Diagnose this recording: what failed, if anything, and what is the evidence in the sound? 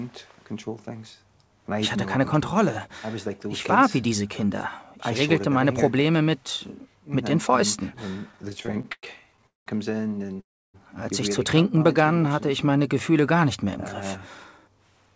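Repeated stalls (stutter), 8.32 to 9.68 s, at the network and jitter-buffer stage: the sound breaks sixteen times, the longest hold about 194 ms, and about a third of that span is filler. Packets kept arriving late, so the buffer emptied repeatedly and the receiver stretched the last sound each time, fading it in the longer waits. Nothing is lost, but the audio drags.

Short stall from a late packet, 10.26 to 10.30 s, in the jitter buffer: one sound is held about 20 ms too long. A single packet missed its playout time, the buffer ran dry, and the receiver extended the last sound until it arrived. Playback then resumed 20 ms later than before.

Call audio freeze, 10.40 to 10.76 s: the sound stops and is carried on briefly before going silent for about 310 ms of the 335 ms hold. The likely cause is packets held up on the network, emptying the jitter buffer. Playback then picks up from where it stopped, about 335 ms late.

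Jitter buffer slow-down, 11.78 to 13.66 s: the audio runs at 93% speed at an unchanged pitch. About 136 ms was added by repeating single pitch periods and bits of pauses, so the buffer could rebuild its reserve. Across the whole clip, nothing above 8 kHz comes through the call path, which fits a G.722 codec.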